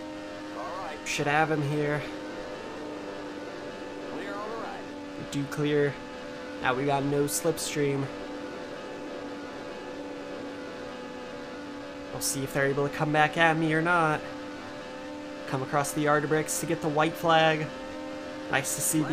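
Nothing in this recording stands out as a technical fault; it all comes across steady and undisturbed.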